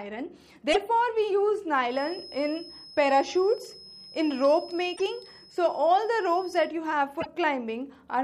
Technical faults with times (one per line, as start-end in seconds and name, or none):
0.69-0.76 damaged data in a compressed stream
1.85-6.74 feedback whistle
4.93-5.00 damaged data in a compressed stream
7.17-7.27 damaged data in a compressed stream